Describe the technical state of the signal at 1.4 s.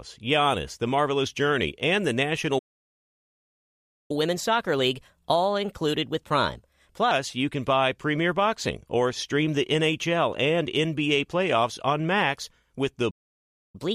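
At 1.4 s the speech signal is intact, with no audible technical fault at that moment.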